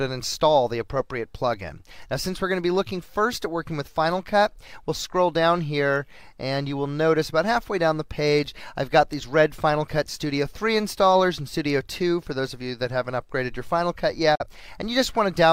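A digital broadcast dropout occurs from 14.35 to 14.46 s: the receiver stopped getting decodable frames and muted, fading the sound out over about 8 ms into a brief silent hole, which fits a single lost frame. The programme then resumes, with that moment missing.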